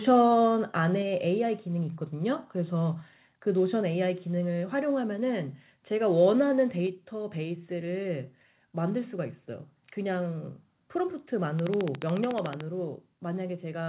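At 1.02 s, 3.81 s and 6.87 s the speech drops abruptly in level, by about 3 dB, about 2 dB and about 3 dB. This is the microphone volume stepped down, likely by the call software lowering the input gain after judging the microphone too loud. Voice and room background fall together in a single instant step and stay at the new level. That sets it apart from a compressor or automatic gain control, which would ride the level up and down smoothly.

From 11.59 s to 12.62 s a train of clicks runs over the sound: roughly fifteen sharp, closely similar ticks at a regular 13.8 per second, peaking roughly 20 dB above the speech, with a likely cause in electrical interference or a faulty connection. Because the ticks keep the same shape and steady pace and carry on through pauses, they are not packet-loss glitches from the call path. That path's G.711 coding adds its usual coding noise and a band limit, with nothing above 4 kHz.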